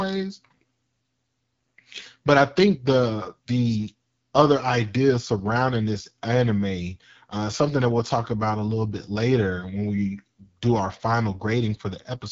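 AMR wideband (HD Voice) codec damage runs throughout the clip. The speech is rebuilt from a pulse-driven vocal tract model with a noise-filled top band, and nothing sits above 7.5 kHz. The plainly audible rasp fits the low 8.85 kbit/s mode.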